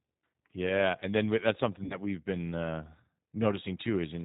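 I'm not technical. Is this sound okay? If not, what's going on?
No. The call was squeezed through the G.729 codec, a phone-line voice compressor that rebuilds speech from a rough model of the voice and discards everything above 4 kHz. Throughout the clip, speech sounds thin, muffled at the top, slightly rough and a bit synthetic.

There is also VoIP packet loss concealed by the speech codec. From 1.84 to 1.98 s, just after "and then that's" and before "we've been uh", about 60 ms of audio never arrived. The decoder filled the gap by stretching the last sound it had, so that moment turns into a brief stretched, fading sound, and the voice stays weak or distorted until it recovers.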